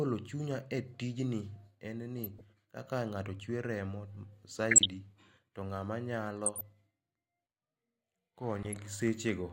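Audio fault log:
2.19–2.41 s (just before "kaka ng'ato"), 4.69–4.86 s, 6.45–6.61 s (right after "to ng'ama"), 8.63–8.79 s: DAB burbling. Short noise blips in single sub-bands come from a fraction-of-a-percent bit error rate slipping past error correction into the MP2 audio data.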